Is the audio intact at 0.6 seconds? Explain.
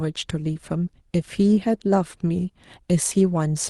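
No. Short concealed packet loss from 0.53 to 0.57 s: about 20 ms of audio, fitting one packet, arrived too late, so the decoder extended the preceding sound, leaving a brief smear.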